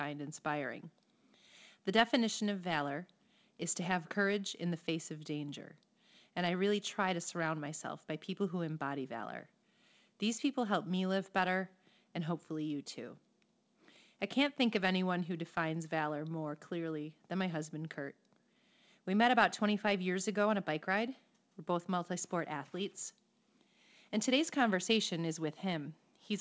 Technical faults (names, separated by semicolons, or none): none